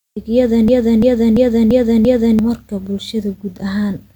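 From 0.68 to 2.39 s a system hang loop takes over: the driver stalled while the hardware kept replaying one 341 ms chunk of speech, which fits a 16384-sample buffer. It repeats exactly five times at 2.93 Hz, a rhythmic machine-gun stutter, and about one and a half seconds of speech is lost. The identical repeats set it apart from dropouts or gaps that are concealed.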